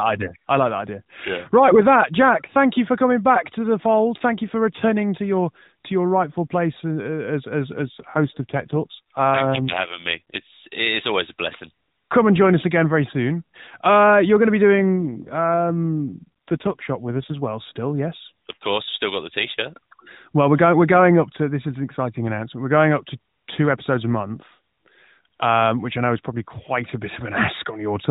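From 7.76 s to 10.44 s, just after "as as" and up to "it's always a blessing", an AMR rate drop roughens the speech. It turns buzzy and synthetic, consistent with the codec stepping down from around 12.2 kbps to about 5.9 kbps. The same happens again from 14.77 s to 17.41 s. Unlike packet loss, nothing drops out, and unlike a bandwidth fall the narrowband 4 kHz ceiling stays put. Only the texture coarsens, then recovers.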